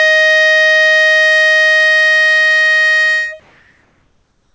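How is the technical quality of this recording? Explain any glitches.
One glitch stands out in this music recording, and throughout it the top end stops at 8 kHz, consistent with a G.722 call codec.

Comfort noise in place of the background, from 3.40 s to the end at 4.55 s: for the final 1.15 s, the quiet background, about 42 dB below the loud passages, becomes a steady, featureless hiss at an unchanged level. The likely cause is discontinuous transmission. The sender paused when its detector judged the input silent, and the receiver filled the gap with synthetic noise shaped roughly like the real background.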